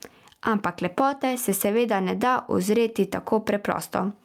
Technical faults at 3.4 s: gain pumping

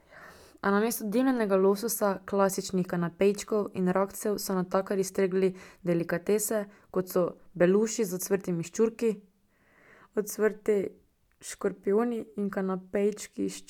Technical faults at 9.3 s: none

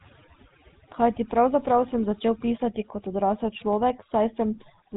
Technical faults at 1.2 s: overdone noise removal; GSM full-rate codec

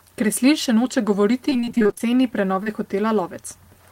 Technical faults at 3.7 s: none

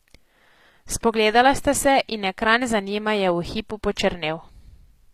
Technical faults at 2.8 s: HE-AAC compression

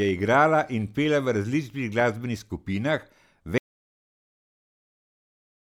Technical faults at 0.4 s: none

